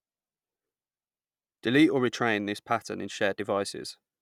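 A short speech recording with no audible technical fault anywhere in the signal.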